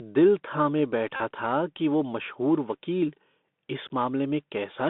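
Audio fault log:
throughout, Bluetooth CVSD headset codec: the speech is confined to roughly 200 Hz to 3.6 kHz, with a granular hiss underneath, scratchy sibilants and plainly audible slope-overload distortion on loud bright sounds, as the one-bit adaptive step fails to keep up, which fits a 64 kbps CVSD link.
1.16 to 1.20 s, Bluetooth headset packet repeated: for about 37.5 ms the last packet's bits are decoded again every 3.75 ms, producing a steady buzz near 267 Hz. This points to roughly ten lost packets concealed by replaying the last good one.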